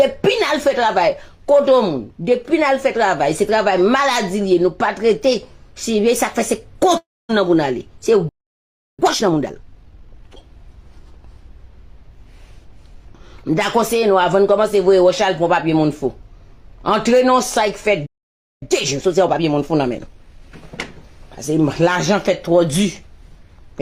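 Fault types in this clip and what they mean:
Long network dropout: At 6.97 s the sound smears into a fading buzz or hiss, then goes silent; about 0.32 s is lost, likely from missing network packets.
Playback stall: The sound halts mid-flow at 8.29 s for 0.70 s and at 18.06 s for 0.56 s, likely the player running short of data.
Time-compressed catch-up: After each stall the audio hurries at normal pitch, 1.5 times speed from 8.99 s, then 1.25 times from 18.62 s.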